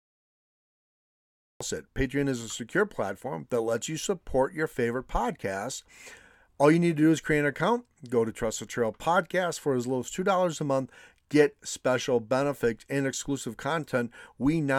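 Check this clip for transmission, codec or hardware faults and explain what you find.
One fault is present: a cut-off start. Capture began after the speaker had already started, so the first 1.6 s are digital silence, and at 1.6 s the speech enters abruptly mid-sound, with no natural attack or fade-in, as though switched on partway through a syllable.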